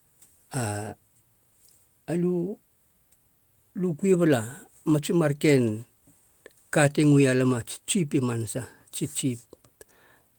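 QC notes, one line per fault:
No faults to flag here, the speech runs along with nothing catching the ear.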